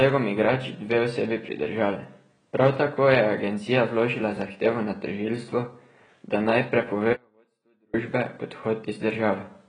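From the start the speech carries heavy AAC compression damage. Nothing is present above 9.7 kHz, so the top end is dull, and the remaining bands are coarsely quantised, giving a smeared, warbling quality to sustained vowels and a fizzy edge on sibilants. This level of damage fits AAC-LC at around 16 kbps, likely the cause, where too few bits per frame force the encoder to drop the upper band and starve what remains.

At 7.13 s the speech cuts out abruptly and stays gone until 7.94 s, a gap of about 0.81 s. This is an audio dropout to a faint residue. The signal does not fade or pause naturally; it is simply lost mid-flow, and the gap holds only a faint trace of sound roughly 40 dB below normal level. This likely points to a break in the source while the path downstream stayed live, after which the speech resumes just as abruptly.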